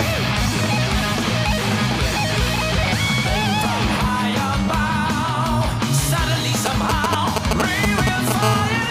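From 6.66 to 8.32 s, GSM signalling bursts break in at roughly the level of the sound itself: a galloping dit-dit-dit of brief 217 Hz buzzes, as a nearby 2G phone sends short radio bursts that the audio circuit rectifies. A spectrogram shows clustered vertical stripes with harmonic stacks.

From 8.43 to 8.85 s comes a steady GSM phone buzz, about 5 dB below the sound. It is a hard, raspy 217 Hz tone rich in harmonics, as the phone, now in a call, transmits in bursts 217 times a second. The spectrogram shows evenly spaced horizontal lines, and the waveform shows regular pulses.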